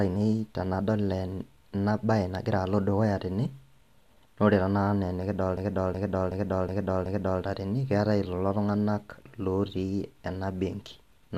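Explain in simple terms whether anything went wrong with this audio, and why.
From about 5.57 to 7.43 seconds, the speech gets stuck: the same short snippet, a bit over a third of a second long, plays five times in a row, a stuttering repeat about 2.7 times per second, before normal speech returns with "tene keetae ilelo tung'anak". This is a system hang loop. The computer briefly froze while the sound hardware kept replaying its last chunk of audio, which fits a 16384-sample buffer. Practically no speech is skipped.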